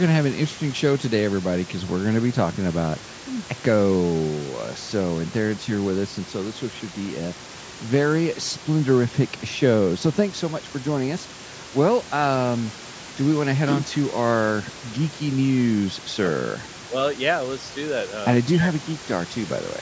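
No technical faults are audible.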